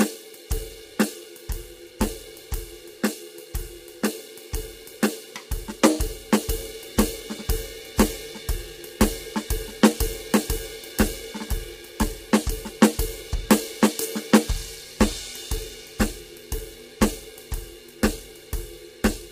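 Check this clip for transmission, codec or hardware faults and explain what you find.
One codec fault runs through the whole of this music clip: low-delay AAC compression. The heavy damage throughout was likely caused by a low-delay AAC-ELD encoder, whose very short frames resolve pitch harmonics coarsely and spend bits inefficiently, a strain that fits a bitrate around 24 kbps. The music turns rough and grainy from start to finish. Noise fills the gaps between harmonics, and the top band sounds dulled or synthetic.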